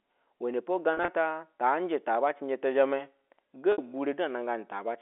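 Around 0.94 to 1.08 s, just before "ata taa", there's packet loss with pitch repetition: roughly 80 ms goes missing in short bursts, none longer than 30 ms, so you hear a slightly held, buzzy stutter. At 3.72 to 3.78 s a 60 ms loss gets the same patch-up.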